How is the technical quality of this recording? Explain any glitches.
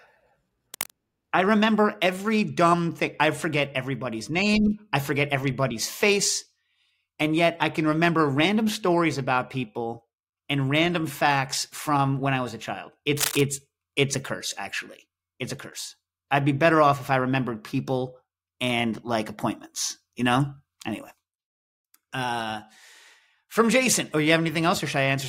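The speech carries two short bursts of cable scratch noise. From 0.74 to 0.92 s, just before "I remember every dumb", and from 13.16 to 13.41 s, between "I was a child" and "it's a curse actually", a dense, uneven scratching rides over the sound, roughly 10 dB and then about 5 dB below the signal. This is likely a worn cable or connector being moved, with its contact resistance fluctuating rapidly.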